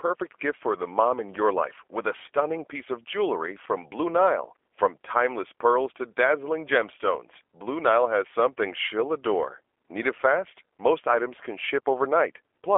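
From start to finish the speech carries G.729 codec coding, which fits an 8 kbit/s stream. Each frame is rebuilt from a vocal tract filter, pitch predictor and sparse pulses, leaving the voice plainly rough and synthetic. The band runs roughly 300 Hz to 3.4 kHz, with nothing above 3.4 kHz.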